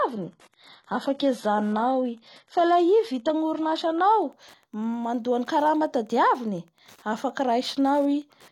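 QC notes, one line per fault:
0.0–4.0 s, adaptive stream starting at a low bitrate. The speech opens dull, with nothing above 11.8 kHz and synthetic-sounding highs, which points to a low-bitrate HE-AAC start. At 4.0 s the player steps up to a better stream, with no gap.
Throughout, Wi-Fi interference. A steady tick sounds about ten times a second, every 102.4 ms, some 40 dB below the speech. The audio circuit rectifies a nearby Wi-Fi radio's beacon, so each beacon becomes a click.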